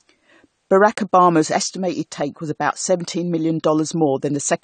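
From start to finish the speech sounds dull and a bit smeared, with nothing above 9 kHz and a warbly, fizzy edge on sibilants. That's likely AAC compression, AAC-LC squeezed hard enough to drop the top end and thin out bands, which fits roughly 32 kbps.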